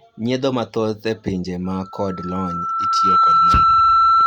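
From 1.64 s to the end of the clip, a loudspeaker feedback squeal develops. A steady tone at 1.3 kHz appears and swells over roughly a second and a half until it sits about 10 dB above the speech. The microphone is picking up the loudspeaker it drives, and at 1.3 kHz the loop gain exceeds one, so that frequency keeps reinforcing itself. It is still sounding when the clip ends.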